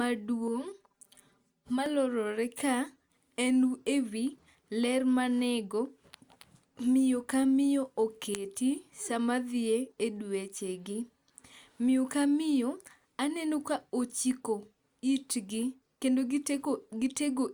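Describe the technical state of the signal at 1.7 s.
At 1.7 s the speech shows channel delay (comb filtering), from 0.48 to 1.86 s: one channel lags by around 5 ms, so summing cancels evenly spaced frequencies from around 100 Hz, leaving a hollow, phasey sound.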